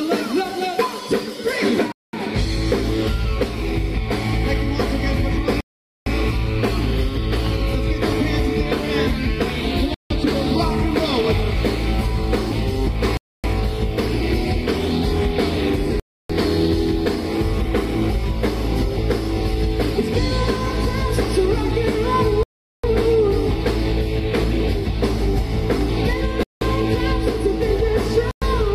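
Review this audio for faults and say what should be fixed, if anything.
The audio cuts to silence eight times, at 1.92–2.13 s, 5.61–6.06 s, 9.94–10.11 s, 13.17–13.44 s, 16.00–16.30 s, 22.43–22.84 s, 26.43–26.61 s and 28.31–28.42 s, lasting between 0.11 and 0.46 s. The likely cause is a Bluetooth stall: interference delayed packets, the headphone buffer emptied and playback paused until resent data arrived. Unlike a glitch or crackle, each gap is clean, whole silence before the sound resumes. To prevent it, reduce 2.4 GHz interference and keep the phone close to the headphones.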